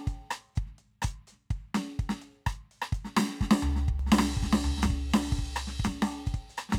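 A second, late copy of the signal gets mixed back in from 3.99 s to the end of this music clip, most likely because a slower capture path or an out-of-step edit is carrying the same material twice. The result is a doubled audio track: a full-band duplicate trailing about a second behind, at roughly the same loudness as the original, with no decay or room colour. It cuts in abruptly and runs to the end.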